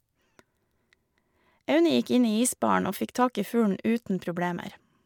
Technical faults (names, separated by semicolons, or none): none